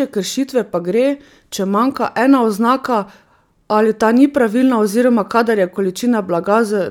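No technical faults can be heard in the speech, so there are none to describe in time order.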